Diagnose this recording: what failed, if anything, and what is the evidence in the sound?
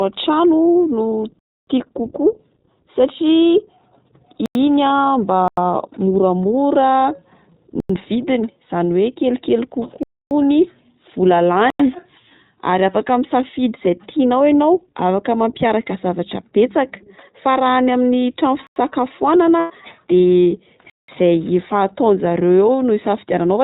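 The codec stage coded the whole speech recording as iLBC, consistent with its 15.2 kbps mode and 20 ms frames. Nothing reaches above 4 kHz, so the sound is dull and narrowband, and the damage is plainly audible as a rough, somewhat synthetic texture on the voice.

The driver or buffer stage repeatedly failed to fill the output in time, leaving blocks of digital silence. Each drops abruptly to silence at 1.39–1.67, 4.46, 5.48, 7.80, 10.03–10.31, 11.70, 18.67 and 20.90–21.08 s. The gaps run about 93, 186 and 279 ms, which fits whole multiples of a 4096-sample buffer.

The network lost packets and the iLBC decoder concealed them. From 19.58 to 19.72 s, about 120 ms fits six lost 20 ms frames. The decoder repeated the last pitch cycle mixed with noise, giving a held, slightly buzzy vowel before the sound snaps back almost immediately.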